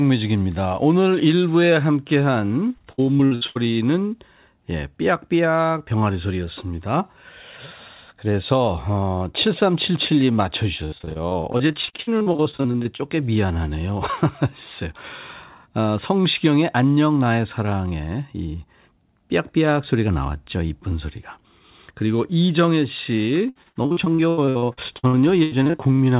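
Repeated packet loss (robotic sound) hits this speech three times: 2.68 to 3.57 s, 10.85 to 13.01 s, and 23.49 to 26.00 s. In each stretch, packets keep going missing, and the receiver fills every hole by extending the last sound it had. Roughly a third of each span is patched this way, with single gaps up to 82, 66 and 84 ms. The result is choppy speech with pieces missing, heard through a G.711 call path that has nothing above 4 kHz.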